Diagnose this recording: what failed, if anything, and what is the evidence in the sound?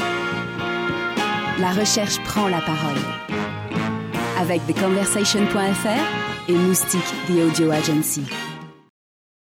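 Nothing failed at any stage I can hear, and no stretch of the recording gives evidence of a fault anywhere in the chain.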